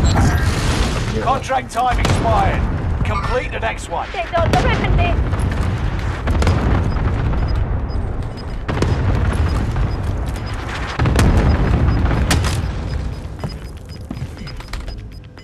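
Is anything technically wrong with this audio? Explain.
Yes, there are four places where the frames are out of order, at 4.63 to 4.84 s, 8.31 to 8.53 s, 11.27 to 11.48 s and 13.96 to 14.06 s. Two adjacent runs of frames were swapped in transit and decoded in that order, so each stretch plays its halves exchanged. The halves are about 105 ms each in the first three and 52 ms in the last, which fits swaps of four and two frames. Each one sounds like a brief garbled flutter, and no time is lost. A waveform or spectrogram would show sharp discontinuities and vertical lines at the three joins of each swap.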